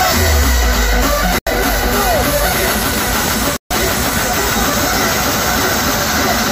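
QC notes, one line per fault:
1.39–1.47 s and 3.56–3.71 s, Bluetooth dropout: the sound vanishes for about 81 ms, then for about 142 ms, and resumes as though it had kept playing underneath, so that stretch of content is simply gone. Each gap is likely a run of wireless packets that missed their delivery deadline, with the second gap about 1.75 times as long as the first. On the waveform, the trace collapses to near silence with abrupt or briefly faded edges. A spectrogram shows a blank vertical band across all frequencies.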